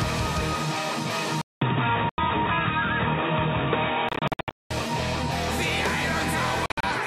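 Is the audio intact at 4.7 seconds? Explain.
No. From 1.41 to 4.71 s the sound is dull and boxy, likely from the input switching to a poorer device. A spectrogram shows nothing above 3.8 kHz, a new low noise floor, and a 200 ms gap at the switch.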